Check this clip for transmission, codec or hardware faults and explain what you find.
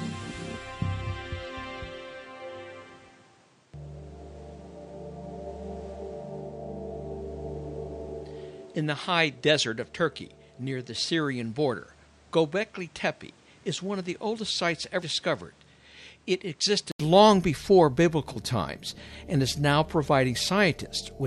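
Two faults are audible.

Input switched to a poorer device, 0 to 17.0 s: the recording likely ran through a lesser microphone here. Nothing above 10.2 kHz, a noise floor about 30 dB down and about 5 dB lower level, then an 80 ms gap at the switch.

Compressed frames skipped, 15.03 s: one 92.9 ms frame never played, so roughly 100 ms of audio is missing and the sound jumps ahead at that point.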